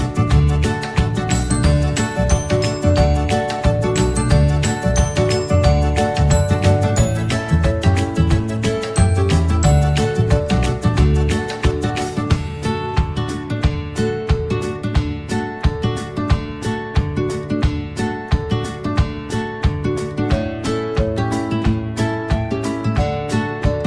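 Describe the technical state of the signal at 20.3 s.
At 20.3 s the signal is intact, with no audible technical fault.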